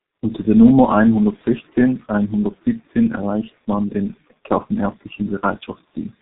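From start to finish the speech carries heavy G.723.1 codec damage, consistent with a low-rate setting near 6 kbit/s. Coarse 30 ms frames and a slowly updated voice model leave it muffled and hoarse, consonants smeared, while a spectrogram shows nothing above 3.8 kHz.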